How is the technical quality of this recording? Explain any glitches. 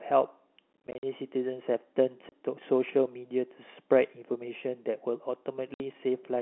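The recording has one kind of fault, packet loss filled with silence, in three places. The sound is limited to the telephone band, roughly 300 Hz to 3.5 kHz, as G.711 coding sets it.

From 0.87 to 1.03 s, about 140 ms of sound is chopped out in several short holes. The longest is 50 ms. Single gaps follow at 2.29 s, lasting 30 ms, and at 5.74 s, lasting 60 ms. Packets were lost, and the receiver played silence in their place. The gap lengths fit 10 ms packets. Each hole starts and stops abruptly.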